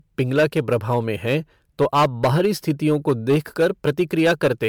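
From start to finish the speech shows hard clipping: driven about 10 dB past full scale, a few percent of samples are sheared flat, so loud syllables crackle and fuzz. The waveform shows squared-off, flat-topped peaks, and the spectrogram shows vertical smears of high harmonics on each peak.

Also throughout, the sound is swirly, hollow and smeared, with blurred consonant onsets. The likely cause is generation loss from several successive MP3 passes at around 128 kbit/s. The spectrogram shows patchy holes, watery texture and an empty band above 19.9 kHz.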